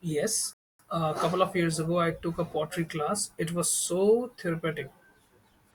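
At about 0.53 s the player runs out of downloaded audio and has to wait for more data before it can continue, a rebuffering stall. The speech cuts abruptly to silence until about 0.79 s, then picks up at exactly the point where it stopped, with nothing skipped or repeated. The gap adds roughly 0.26 s to the running time, so the pause sounds like a hard dropout rather than a natural hesitation.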